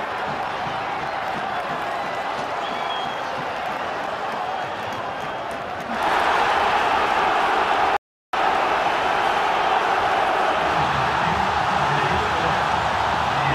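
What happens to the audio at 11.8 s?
Nothing goes wrong at 11.8 s; the audio runs through that moment intact, with no dropout, click or distortion.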